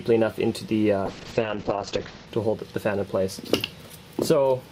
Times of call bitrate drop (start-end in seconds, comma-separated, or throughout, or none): 1.07-2.33